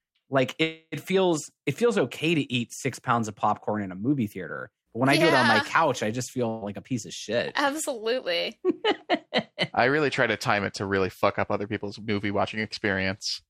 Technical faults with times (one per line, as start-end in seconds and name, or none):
0.63-0.95 call audio freeze
6.49-6.64 burst of packet loss
8.18-8.63 jitter buffer speed-up